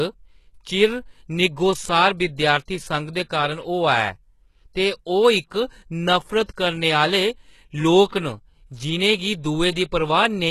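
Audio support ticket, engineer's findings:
HE-AAC compression throughout, plainly audible. Treble stops at 12.3 kHz. Likely a very low bitrate, around 16 kbps, with upper bands copied up from below.

Pre-echo, 8.09 to 8.12 s. Noise smeared about 37 ms ahead of an attack. Transform codec spreads quantisation noise across the whole block, before the onset.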